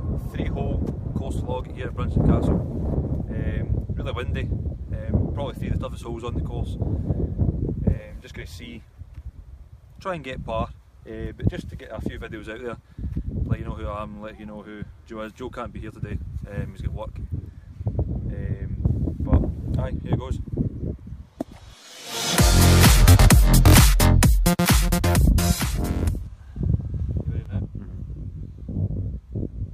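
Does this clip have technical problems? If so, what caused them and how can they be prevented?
Yes. From 27.46 s to the end at 29.73 s there is channel delay (comb filtering): one channel runs around 20 ms late, and summing to mono makes the sound rough and doubled, with notches spaced from around 30 Hz. Unlike a distinct echo, the copy fuses with the original. Prevent it by aligning both channels before the mono downmix.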